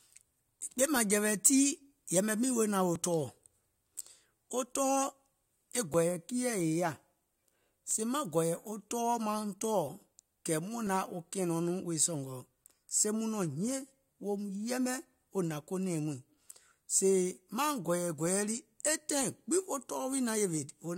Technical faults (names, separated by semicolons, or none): overlap between stream segments